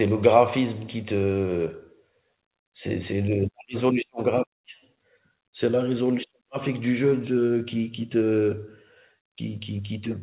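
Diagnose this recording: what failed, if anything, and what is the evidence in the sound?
Nothing has failed in this speech recording: it came over a WebRTC call path coded as G.711 mu-law at 64 kbps, so its content stops at 4 kHz, as that narrowband path dictates, and no stage in the chain shows a fault.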